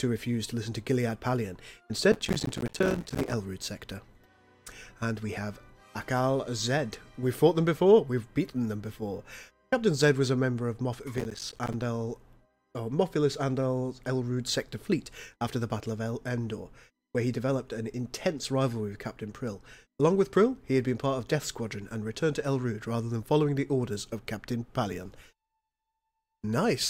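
A gritty, tearing crackle rides on the sound from 2.12 to 3.33 s and again from 11.18 to 11.82 s. This is processor overload crackle: about 100 and then about 30 tiny buffers, around 5 ms each, miss their deadline and drop out as hard-edged silent gaps.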